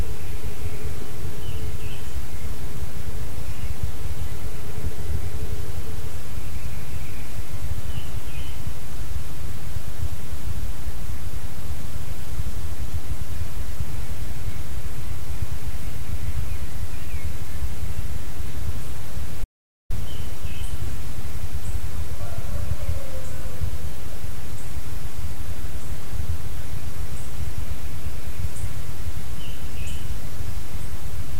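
A recording of sounds with one clear audio dropout to silence: at 19.44 s everything cuts out mid-flow and comes back at 19.90 s, so a bit under half a second is simply gone. The gap is dead digital silence, with no room tone or background hiss at all, which tells you the input itself vanished while the recorder kept writing silence. That's most likely a brief disconnect, a failed link or an accidental mute.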